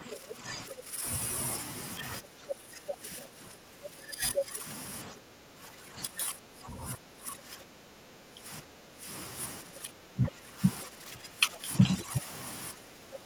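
From 0 to 1.05 s, speech suppressed in double talk pulls the talker down by about 10 dB. The echo canceller likely could not separate the talker from the loudspeaker echo, so it turned both down. From 0.11 to 0.35 s, the other side's voice leaks through, faint, about 10 dB below the talker. This is residual echo the canceller likely failed to remove. The suppression returns from 2.2 to 4.65 s, about 15 dB deep. Within it, from 4.35 to 4.4 s, a brief scrap of the other side's voice rises about 5 dB above the talker. Deeper dips of up to about 20 dB follow from 5.05 to 9.07 s and from 9.62 to 10.62 s. Milder ones of about 10 dB come from 10.84 to 12.26 s and from 12.72 s to the end. Each time, the voice sinks.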